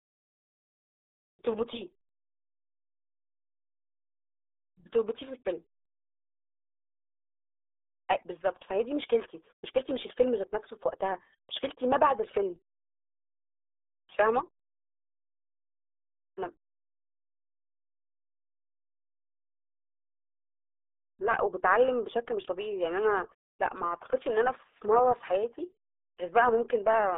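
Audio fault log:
throughout RealAudio 14.4 codec. Speech sounds muffled and gargly, squeezed into 300 Hz to 3.6 kHz, with nothing above 3.8 kHz. This fits an 8 kbit/s dial-up codec.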